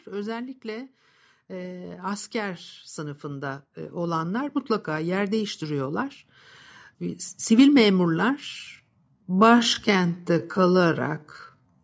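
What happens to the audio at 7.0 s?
At 7.0 s the speech carries on intact, with only the ordinary trimming of the lowest bass from the call's microphone processing.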